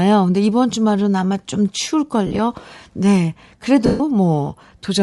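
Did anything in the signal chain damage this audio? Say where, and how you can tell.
Yes, at the codec stage throughout. The upper spectrum of the speech has a grainy, breathy hiss where detail should be, and the damage is plainly audible across all 5 seconds. That points to Bluetooth LC3 compression, likely at a low rate, around 48 kbps with 10 ms frames. The encoder discards much of the high band and fills it with noise. That is why the top sounds textured rather than simply dull, as it would from a lowpass filter or a low sample rate.

At the network or radio link, lost LE Audio frames appear twice. From 2.27 to 2.39 s, 70 ms goes missing in short scattered gaps over 120 ms, the longest run a few tens of milliseconds. From 3.86 to 4.00 s, a 140 ms loss, fitting fourteen 10 ms frames, is concealed. The decoder repeats the last spectrum with randomised signs, so each gap is filled with a noisy copy of the preceding sound, and the longer loss fades toward silence. 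A plain dropout would instead cut to an abrupt hard gap.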